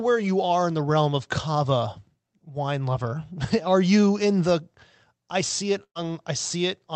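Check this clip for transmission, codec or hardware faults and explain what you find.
There's one clear fault: a burst of packet loss from 5.83 to 5.97 s. About 120 ms of audio went missing, so the receiver stretched the last sound, fading it down until it drops to silence, then the speech jumps ahead.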